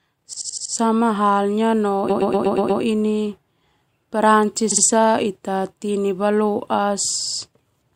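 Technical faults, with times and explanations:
0.33–0.74 s, 2.09–2.81 s, 4.71–4.84 s and 7.21–7.39 s, repeated frames: the same short slice of speech loops in each spot. It's an 80 ms chunk played five extra times, a 120 ms chunk six extra times, then 60 ms chunks two and three extra times. That fits runs of compressed frames being written or sent more than once. The decoder replays them as a stutter, and the clip gains about 1.4 s.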